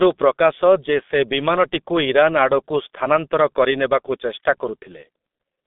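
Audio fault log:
Throughout, G.723.1 codec: the speech sounds muffled, hoarse and boxy, with consonants smeared together. Nothing reaches above about 3.8 kHz, and the usable band runs only from roughly 200 Hz to 3.6 kHz, so sibilance and crisp detail are gone. The damage is heavy, with the codec running at 6.3 kbit/s. The codec's 30 ms frames update its voice model slowly, so rapid changes between sounds blur and roughen the tone.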